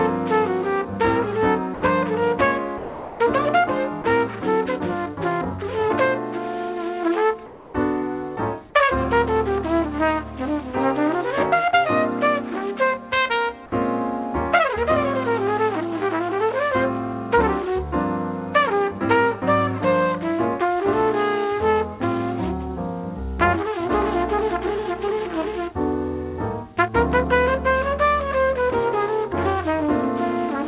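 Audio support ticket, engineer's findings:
Sound dropped by the voice detector, 1.74–1.82 s, 2.78–3.2 s, 4.02–4.04 s. Sound cuts out and is replaced by steady hiss for 80 ms, 420 ms and 20 ms, then resumes. Likely sender-side voice detector misreading quiet passages as background, halting transmission; receiver fills gaps with synthetic noise. Longest gap at 2.78 s.

Comfort noise in place of the background, 7.46–7.74 s. Background, about 21 dB below loud passages, loses its texture for 280 ms and becomes flat, featureless noise, about 2 dB quieter. Likely discontinuous transmission: sender pauses during the gap, receiver synthesises approximate noise until real audio returns. Audio band topping out at 4 kHz, consistent with a narrowband G.711-type call codec.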